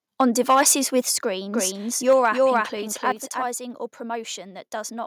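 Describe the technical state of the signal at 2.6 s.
At 2.6 s the sound is heard twice. A doubled audio track runs from 1.52 to 3.46 s, with an equally loud full-band copy trailing by roughly 300 ms. It is likely a second, slower capture path. Unlike a room echo, the copy has no decay and no reverberant colour.

Just before, from 2.55 to 2.57 s, microphone overload likely pushed peaks about 1 dB past the converter limit. This flattened a small fraction of samples into a brief harsh crackle, confined to the loudest moment rather than spread throughout.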